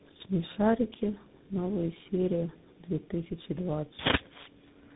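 Throughout the clip the speech shows tandem speech coding: it was decoded and re-encoded at each link, with roughly three speech coders in a row, likely a chain such as G.729A, GSM full rate and CVSD. Each stage compounds the last, leaving rough, warbly, muffled speech with nothing above 3.8 kHz.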